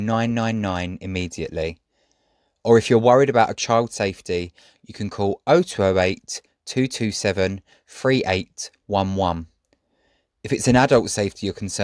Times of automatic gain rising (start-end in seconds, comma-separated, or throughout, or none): none